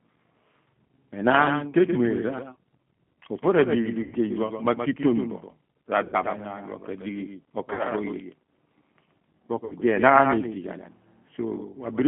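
Across the whole clip a second copy of the speech trails the original by about 150 ms at about 10 dB quieter. This doubled audio track is likely a slower second capture path mixed back in. A waveform shows faint, undecayed repeats of each syllable onset, and a spectrogram shows a full-band ghost of every pattern shifted right.

The speech also carries the G.729 codec's signature throughout. Energy is confined to roughly 150 Hz to 3.4 kHz, which points to G.729A at 8 kbit/s. The codec damage is plainly audible: a rough, slightly synthetic grain. A spectrogram shows a hard ceiling with nothing above it and smeared, blocky harmonics below.

At 4.03 to 4.16 s, 6.04 to 6.17 s, 7.73 to 7.87 s and 9.65 to 9.76 s there are bursts of VoIP packet loss concealed by the speech codec. The first two cover 90 ms of missing audio and the last two 60 ms. Each time the decoder stretches its last pitch and filter into a buzzy tone or coloured noise that fades. 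A spectrogram shows flat, repeated patterns dimming, and the waveform shows a sagging envelope before normal level returns.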